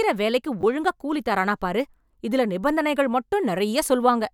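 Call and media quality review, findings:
Repeated buffer, 0.61–0.63 s. Brief buzzy stutter in the speech. A 10 ms block was played twice more after its first pass because new audio missed the playback deadline. The probable component is the output device or its feeding buffer. About 20 ms of speech is lost. On the waveform, three identical 10 ms segments sit side by side with hard discontinuities at each join. The spectrogram shows vertical broadband lines at the seams and harmonic striping near 100 Hz from the repetition.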